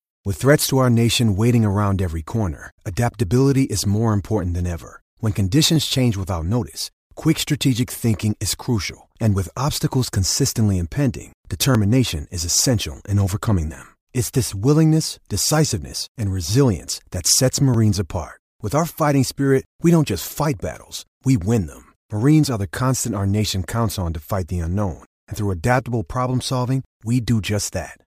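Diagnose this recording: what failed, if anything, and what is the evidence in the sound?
Buffer stage: audio missing between chunks. There are brief skips at 11.75 s, after "obstacles consistently impending", and at 17.74 s, after "and resilience that sets", six seconds apart. Each likely comes from a chunk handover dropping a few milliseconds. On the waveform they appear as abrupt splices, and on the spectrogram as thin vertical lines.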